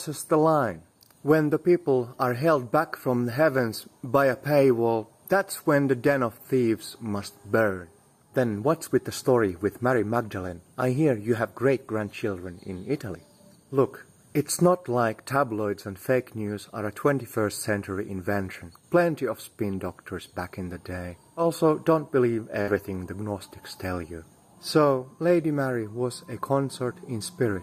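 At 22.61 s there's a burst of packet loss: about 60 ms went missing, concealed by a fading continuation of the last sound, then playback skips ahead.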